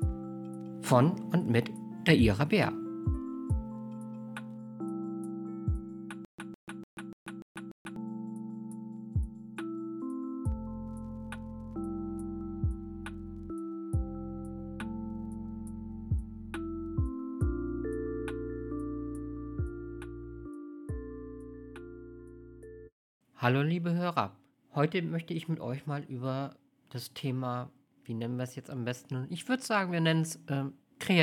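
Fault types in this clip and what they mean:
Stutter with silent gaps: the player or stream likely stalled and replayed its last buffered fragment at each retry, so from 6.25 to 7.96 s a 157 ms burst repeats six times, each followed by about 136 ms of digital silence, every 293 ms, and the audio meant for that span is lost.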